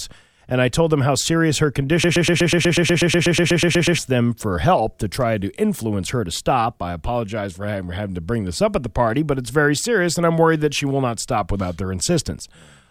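From 2.04 s to 3.98 s the speech stops progressing and a broken-record loop takes over. A fragment about 0.12 s long plays back to back roughly sixteen times, producing a rapid, mechanical stutter with identical repeats. The likely cause is a stall in the player, encoder or stream that kept re-sending the last fragment it held. Whatever speech belonged in those two seconds is missing, and the sound resumes at 3.98 s.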